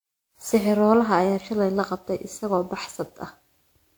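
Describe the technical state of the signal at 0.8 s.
At 0.8 s the speech carries generation loss, which runs through the whole clip. The sound is swirly and hollow, with smeared consonant attacks. The content still extends up to 20.1 kHz, so the damage is not simple band-limiting. The likely cause is repeated lossy coding, around fifteen passes through a codec consistent with WMA 1 at about 128 kbit/s. Each pass requantises on a shifted frame grid, so noise piles up.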